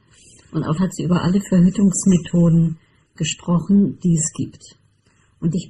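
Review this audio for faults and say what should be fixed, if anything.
Channel delay (comb filtering) runs throughout. One channel arrives a fraction of a millisecond late, and summing to mono cancels their shared content at evenly spaced frequencies, starting around 700 Hz. The result is a hollow, phasey colour with fixed notches. Align the channels sample-accurately before any mono fold-down, or correct the offset at the source.

Damaged data in a compressed stream appears at 0.77 s and again from 5.52 to 5.55 s, each as a brief chirp or blip. Corrupted bytes make the decoder misread those frames and lose sync until it finds the next valid frame header. Re-encode or re-fetch the file from a clean source, and verify it with checksums in transfer.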